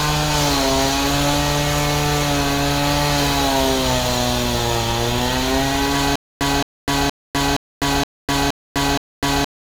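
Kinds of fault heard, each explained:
Stutter with silent gaps: from 6.16 s to the end, the same 218 ms fragment repeats seven times, each followed by about 252 ms of dead digital silence, giving an even cycle near 470 ms. The likely cause is a stalled player or stream replaying its last buffered fragment on each retry, so the audio due in that stretch never arrives. The clean silent gaps set it apart from a seamless loop, and the exact repetition sets it apart from simple dropouts.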